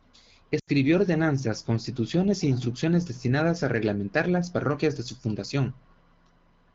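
At 0.59 s the speech smears and fades out until 0.70 s. These are lost AMR speech frames. The decoder repeats its last good pitch and vocal tract settings at falling gain. The gap points to four dropped 20 ms frames in this AMR wideband stream.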